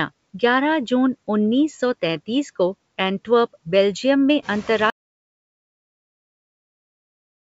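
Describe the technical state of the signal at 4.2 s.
At 4.2 s, as throughout, noise suppressor artifacts appear. Per-band cuts of about 17 dB make the noise sink between words and rise under them, unlike a gate's abrupt on-off muting.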